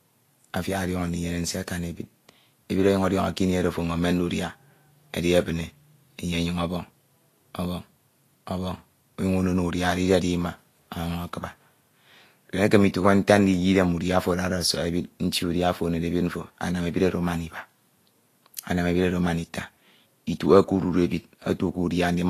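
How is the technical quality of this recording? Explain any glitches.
Technical quality is limited by audible lossy compression. Throughout the speech, the top end is hissy and grainy, with roughened tones and softened consonant attacks. This is likely Vorbis compression at a low bitrate, about 35 kbps, where coarsely quantised treble turns into noise. A spectrogram shows a flat ceiling at 14.2 kHz.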